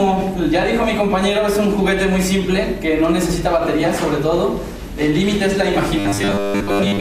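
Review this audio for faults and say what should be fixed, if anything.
From 5.99 s to the end at 7.00 s there's robotic sound from repeated short buffers, a stiff metallic buzz at about 100 Hz. That's likely a 10 ms chunk being replayed when fresh audio doesn't arrive, with most of the real signal skipped. To fix it, give the input stream more buffering headroom so underruns don't trigger repeats.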